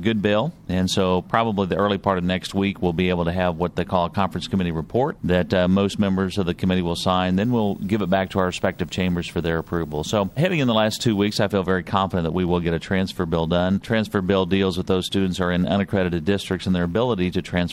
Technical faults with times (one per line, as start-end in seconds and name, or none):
7.40-11.38 video or display buzz